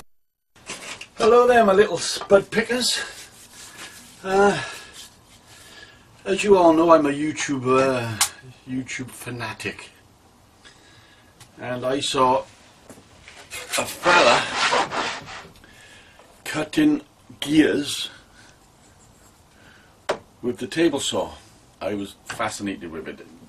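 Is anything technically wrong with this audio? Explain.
No, there's nothing technically wrong to point to here, and the audio just runs along without any trouble at all.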